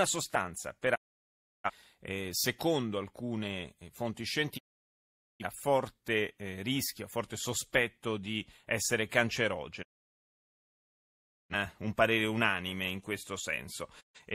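The speech drops out four times, at 0.94 to 1.70 s, 4.57 to 5.45 s, 9.82 to 11.55 s and 14.00 to 14.20 s. Each is a digital broadcast dropout: the receiver mutes with a 20 ms fade while frames are corrupt, and the programme sent in the meantime is lost. On a spectrogram each hole is an empty vertical band, and on the waveform it is a flat line at zero.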